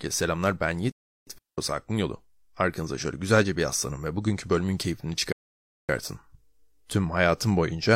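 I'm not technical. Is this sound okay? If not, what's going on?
No. There are three gaps where the speech goes silent.

Playback stall, 0.92 to 1.27 s, right after "selamlar ben": the sound stops for about 0.35 s, likely because the player briefly ran out of data or got held up.

Digital wireless dropout, 1.38 to 1.58 s: the wireless link lost too much data, so the receiver muted for about 0.2 s, leaving a clean silent hole without any crackle.

Rebuffering stall, 5.32 to 5.89 s, after "ve bugünkü bölümün keyfini": the player ran out of downloaded audio, paused about 0.57 s, then resumed exactly where it stopped.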